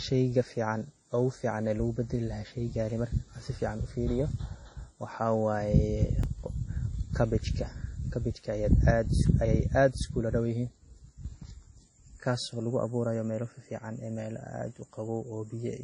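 Speech, carrying coded-audio artefacts for its whole length, with no content above 10.6 kHz and two kinds of smearing and swirl at once, which points to a chain of two low-rate lossy codecs. The likely cause is transcoding between lossy codecs, a WMA encode at around 48 kbit/s re-encoded as MP3 at about 32 kbit/s. At 6.24 s a repeated buffer is heard as a click or brief buzz: one 2.9 ms block, which fits a 128-sample buffer, plays twice with a hard join because new audio arrived late. No audio is lost.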